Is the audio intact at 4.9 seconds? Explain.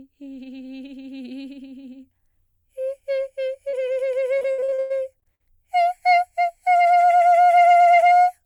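No. Around 4.9 s the music sits inside a run of repeated packet loss (robotic sound) from 4.39 to 5.42 s. Packets keep going missing, and each gap, up to 100 ms, is patched by extending the preceding sound. With over a third of the stretch filled in this way, the music turns choppy, with pieces missing.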